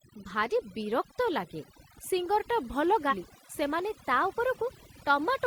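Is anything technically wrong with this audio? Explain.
Yes, three faults are audible in this speech recording.

Overdone noise removal affects the whole clip. A noise reduction stage was set far too aggressive, so it cut frequency bands it judged close to the noise floor, taking quiet parts of the voice with them. The background drops to near silence scattered with twinkling specks. Unlike a plain low-pass or band-limited channel, the loss keeps changing from moment to moment instead of holding a fixed frequency edge.

Damaged data in a compressed stream appears from 3.07 to 3.14 s. Part of the encoded data there was corrupted, so the decoder misread those frames, lost its place and had to search for the next valid frame header. The result is a short glitch of about 70 ms. A dropout or buffer underrun would leave silence or a clean gap.

A drift correction step begins at 3.79 s and lasts to the end. 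Speed and pitch jump together: playback runs about 6.5% faster and the voice sits about 108 cents higher, roughly a semitone. The likely cause is clock-matching software changing the playback rate in a single step to drain or refill its buffer. A pitch-shift effect would leave the tempo alone, but here the speech also hurries, which marks it as a rate change.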